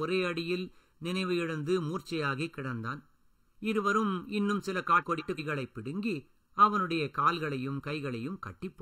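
Channel delay (comb filtering) runs through this whole speech clip. One channel lags by under a millisecond before the mono sum, notching frequencies evenly from around 700 Hz and leaving a hollow, phasey tone. Frames out of order appear at 5.01 to 5.39 s, where two adjacent blocks of about 186 ms play swapped, causing a garbled flutter.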